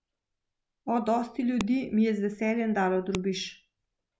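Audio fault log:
1.61 s and 3.15 s, file header played as audio: two sharp, loud snaps, the second right after "je z veseljem dalo". Each is a new piece joined on with its header still attached, so those few dozen bytes play as raw samples and jump out regardless of the speech.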